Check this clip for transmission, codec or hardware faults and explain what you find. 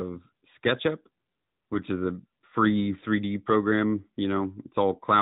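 One fault runs through the whole clip: the AMR narrowband mobile codec. Nothing above 4 kHz survives, so the speech sounds boxed-in and muffled, like an old phone call. The codec samples at 8 kHz and rebuilds the voice from a vocal-tract model fed by a few pulses every 5 ms. That rebuilding is plainly audible here. It leaves a buzzy, synthetic edge, which fits an upper mode near 10 kbps.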